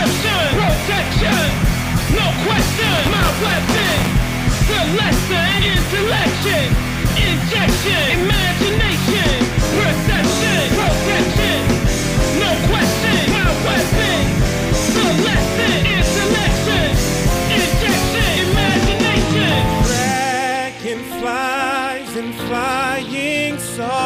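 Buffer tearing from 2.82 to 4.13 s gives a rattling 172 Hz buzz, fitting a 256-sample buffer; a small slice of each period replays audio roughly 10 ms old.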